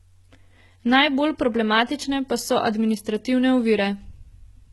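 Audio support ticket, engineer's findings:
HE-AAC compression, heavy, throughout speech clip. Treble present but synthetic: sibilants gritty, metallic, lispy; upper harmonics misaligned above crossover. Likely component: encoder at very low bitrate, consistent with roughly 16 kbps, spectral band replication rebuilding highs from copied lower bands. Distinguishing: plain low-rate AAC/MP3 dulls or swirls the top; here brightness survives, wrong.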